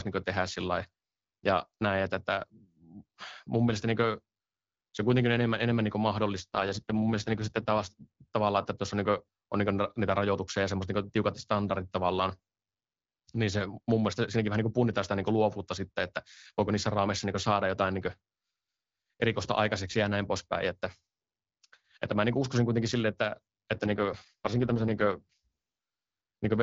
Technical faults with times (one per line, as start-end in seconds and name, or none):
6.37-8.06 AMR rate drop
23.74-25.47 AMR rate drop